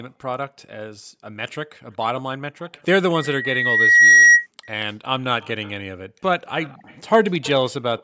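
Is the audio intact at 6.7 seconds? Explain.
No. At 6.7 seconds there is an echo leak, running from about 6.62 to 7.0 s. A faint, delayed copy of the speech trails the original by about 233 ms. It sits roughly 30 dB below the direct speech. The likely cause is a far end playing the call on a loudspeaker, where the echo canceller missed part of what its microphone caught and sent it back.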